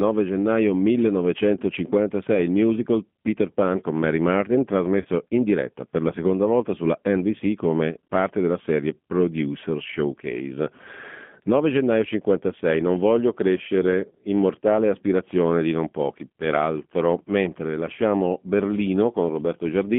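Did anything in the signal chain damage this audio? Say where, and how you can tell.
Yes. At the codec stage, G.729 coding runs throughout: audio confined to roughly 150 Hz to 3.4 kHz, with the rough, synthetic texture of 8 kbit/s pulse-based reconstruction.

At the network stage, VoIP packet loss concealed by the speech codec occurs from 5.02 to 5.07 s, just before "in diretta per la." About 30 ms went missing, which fits one lost packet. The decoder stretched its last pitch and filter into a fading buzzy tone or coloured noise.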